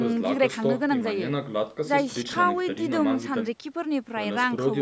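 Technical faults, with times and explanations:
No technical faults are audible anywhere in the speech. It has gone through a call's microphone processing, which leaves nothing above 8 kHz and trims away the lowest bass, as that path normally does.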